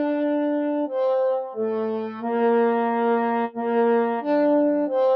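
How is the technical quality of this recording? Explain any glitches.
The technical quality is compromised by processing rather than by the capture itself: a speech-oriented noise reducer is acting on non-speech material.

Across the whole recording, a noise suppressor applied to music or sounds treats sustained tones and ambient decay as unwanted noise. Transients pass, but held material and tails are pulled down by around 5 dB as the gain rides up and down, giving a pumping, fluttery, thinned character. On a waveform the envelope shows uneven dips after each attack. A spectrogram shows tails fading too abruptly, with patchy low-level energy between events.

From 1.41 to 1.57 s comes a case of sound cut by the noise suppressor. Here the processor judged a steady or decaying portion to be noise and attenuated it harder than its surroundings, by about 9 dB at the deepest point, over roughly a sixth of a second. 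The sound briefly sinks, as if ducked. A waveform shows a short hollow in the amplitude envelope, and a spectrogram shows a faded vertical band.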